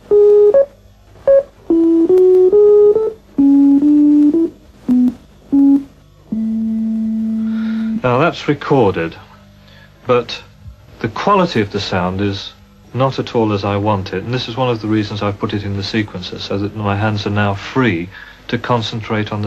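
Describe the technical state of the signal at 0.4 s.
At 0.4 s the signal is intact, with no dropout, distortion, glitch or other technical fault present at that moment.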